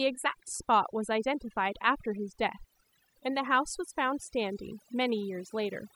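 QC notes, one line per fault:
throughout, overdone noise removal: a noise reduction stage was pushed far too hard on a noisy speech recording, so every frequency band that sits close to its noise estimate is cut deep or switched off entirely, and the softer parts of the voice fall under that line and are removed along with the noise. The gaps between phrases collapse to near silence dotted with twinkling, chirpy specks.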